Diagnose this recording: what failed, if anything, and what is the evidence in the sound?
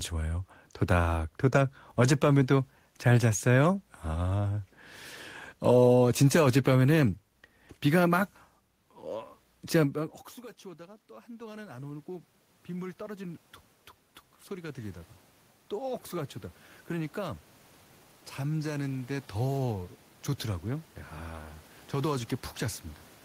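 Automatic gain rising, in the call-processing stage. Around 10 s the talker moves away and the input drops by about 24 dB. From 9.92 s to the end, the AGC slowly raises its gain. Voice and room noise swell together as it compensates.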